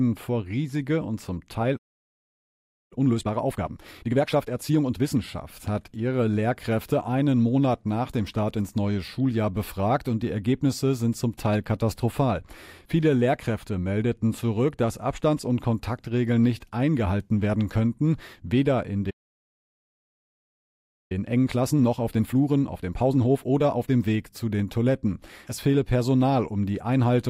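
The player likely ran dry of buffered data or had its output thread blocked at 1.76 s, and this playback stall cuts the speech off mid-flow into silence for about 1.14 s, until 2.93 s. Once output resumes, the player works off its backlog through time-compressed catch-up. Small slices are dropped and cross-faded, so from 2.93 s to 5.21 s the speech runs 1.5 times fast at its normal pitch, finishing just before "hat ihre".

A second playback stall comes right after "werden könnten weder in", at 19.10 s, again likely from the player starving or stalling. This silence lasts 2.0 s, to 21.12 s. Catch-up follows from 21.12 s to 24.12 s. The compression here is gentler, at 1.25 times speed, so the speech sounds hurried.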